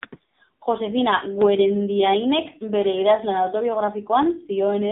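Throughout, the speech carries the AMR narrowband mobile codec. Nothing above 4 kHz passes, so it sounds boxed in. The damage is heavy. A vocal-tract model fed by few pulses leaves the voice buzzy and synthetic. That fits a low mode near 5.9 kbps.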